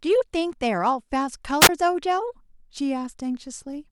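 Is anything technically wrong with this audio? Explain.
Yes. At 1.61 to 1.69 s, a wireless microphone squelch dropout: the radio signal faded and the receiver muted, so the speech vanishes into near silence for about 18 ms.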